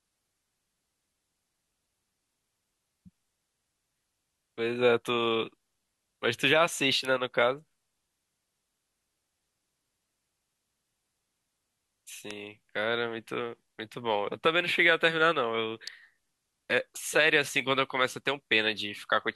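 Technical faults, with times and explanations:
7.05, 12.31 and 15.88 s: electrical switching spike. Brief sharp snaps over the speech, the first noticeably louder, likely a nearby switch arcing into the audio line.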